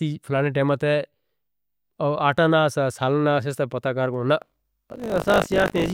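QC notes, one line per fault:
4.4 s to end, buffer tearing: a steady robotic buzz at 50 Hz rides on the speech until the clip finishes. The writing side and the playback hardware have slipped against each other, so every period (about 20 ms, by the buzz rate) contains a small slice, something like a sixth, of stale audio from roughly 40 ms earlier, joined hard at both edges. Those repeated discontinuities at the period rate form the buzz, which appears only while speech is present.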